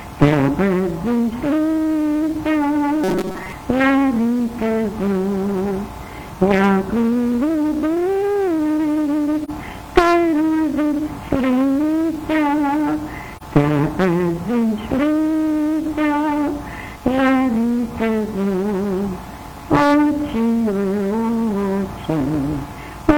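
From 3.04 to 3.53 s, new audio likely arrived too seldom, so the playback path kept repeating a short buffer of roughly 5 ms while most of the real audio was skipped. The result is robotic sound from repeated short buffers: a rigid, metallic buzz locked at 188 Hz. At 9.44 to 9.50 s and again at 13.36 to 13.43 s, a single AAC frame was lost and its spectrum was muted, a gap of about 43 ms each time. Each AAC frame loss with muting sounds like a brief dropout whose edges fade out and back in rather than cutting sharply.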